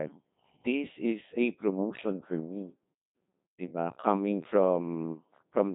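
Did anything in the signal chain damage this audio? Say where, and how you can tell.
Yes, at the codec stage. Codec 2 vocoder damage runs throughout: robotic, buzzy speech with nothing above 3.8 kHz. The sinewave resynthesis suggests a very low bitrate, around 2.4 kbit/s.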